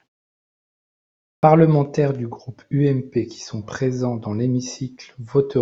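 After about 1.2 s of silence the output device has gone idle, and it needs roughly 200 ms to wake and lock again. That produces a clipped start after a pause: from 1.23 to 1.43 s the opening of the speech is swallowed, so it begins abruptly, missing its first sounds.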